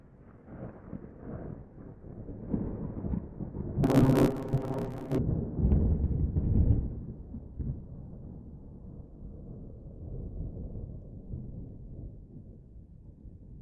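From 3.83 to 5.18 s the sound turns into a robotic buzz pulsing at about 66.7 Hz, with no clear octave jump. This is planar audio read as interleaved. Each 15 ms block holds all its left-channel samples followed by all its right-channel samples, but it is read as alternating left-right pairs. Each block therefore plays twice at double speed, left then right, which keeps the pace intact. Because the blocks are so short, the repetition registers as a buzz at the block rate rather than a pitch shift.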